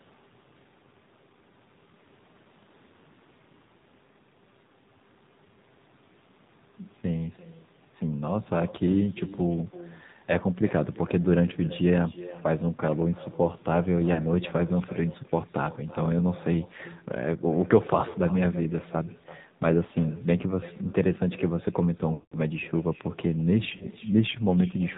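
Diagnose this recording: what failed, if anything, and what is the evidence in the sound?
Call processing failed: there is echo with no canceller. Every phrase returns as a quieter, thinner copy, about 19 dB down and delayed by roughly 300 ms. That delay is a network round trip from a far-end loudspeaker, unlike short room reflections, which would blur into the voice rather than repeat it.

The codec stage is the AMR narrowband mobile codec. Throughout, nothing above 4 kHz survives, and the speech sounds plainly buzzy and synthetic. That fits a low AMR-NB mode near 7.4 kbps. Pulse-excited modelling gives this synthetic buzz, which sets it apart from a simple low-pass filter's dull but natural tone.

The network radio link caused lost AMR speech frames at 14.14–14.22 s, 18.10–18.16 s, 22.14–22.39 s and 23.76–23.88 s. The short ones give brief warbling dips. The 0.25 s one stretches the sound and fades to silence before rough recovery. 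This is decoder concealment, not abrupt dropout clicks.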